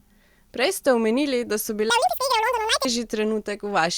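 From 1.9 to 2.85 s, audio read two samples at a time (double speed) makes the speech race at 2x and an octave higher.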